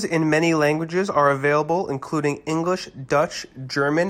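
A short speech recording, and there is nothing technically wrong with it.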